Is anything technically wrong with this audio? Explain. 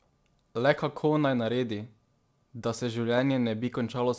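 Yes. Throughout, there is clock drift between sender and receiver: the sending clock runs about 3% slow, so the jitter buffer keeps draining rather than overflowing. From 0.04 to 3.95 s, repeated timing corrections stretch the audio by short repeated pieces, slowing it to 98% speed and adding about a tenth of a second. These are heard as faint hiccups and a slightly dragging tempo at uneven intervals, all lengthening, which distinguishes them from random jitter. The call path's G.722 coding leaves nothing above 8 kHz.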